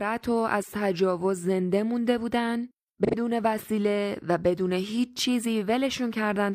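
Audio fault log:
3.05–3.15 s, AAC frame loss with concealment: roughly 85 ms of the speech is missing from the decoded stream, which fits two consecutive AAC frames being lost. Rather than leaving a gap, the decoder rebuilds the missing span from the last intact spectrum, reusing its energy with altered phase or sign. The result is a short smeared, noisy patch where the detail of the speech briefly blurs before normal decoding resumes.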